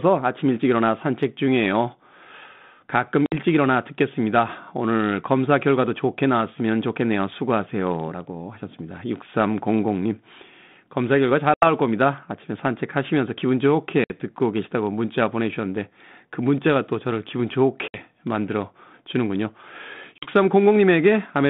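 At 3.26, 11.54, 14.04, 17.88 and 20.18 s the speech drops out in hard-edged holes. That's packet loss on an ADPCM call, with roughly 60, 80, 60, 60 and 40 ms gone, a few packets each time. The gaps get filled with silence, so the decoder's predictor and step size drift away from the sender's. Each time the speech comes back with a bit of grit before it settles. The line itself sounds like G.726 at something like 32 kbit/s, band-limited to about 150 Hz to 3.7 kHz.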